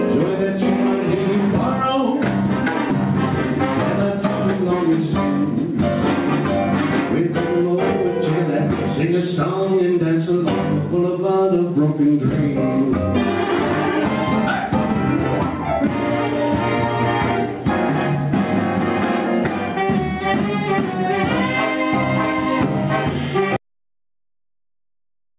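From the start the level breathes, a swing of around 10 dB that leaves loud and quiet passages pressed close together and the whole sound flattened. This is gain pumping. The likely cause is an input gain set far too high, with a fast limiter or compressor clamping down on each peak and releasing again in the gaps.

At 23.56 s the audio stops dead and stays silent through to the end. There is no room tone and no hiss, just flat digital silence, and whatever followed is lost. This is an audio dropout to silence. The likely cause is the input disappearing, through an unplugged device, a broken link or an accidental mute, while the recorder kept writing silence. Before the cut, the narrow band with nothing above 4 kHz fits a G.711 call path.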